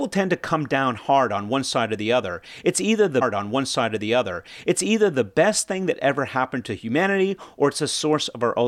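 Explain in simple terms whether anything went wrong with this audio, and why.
The player queued one piece of the stream twice, a stream segment repeated fault. After "either the", about 2 seconds plays again from 3.21 to 5.23 s, before "best thing that ever".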